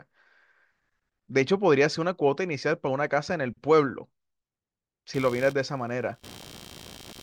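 From 5.14 s to the end of the speech, computer activity noise appears: a buzzy, chirping pulse train near 70 Hz, roughly 20 dB below the speech, from processor or peripheral load disturbing the shared audio ground. Unlike steady mains hum, it starts abruptly with the computer's activity.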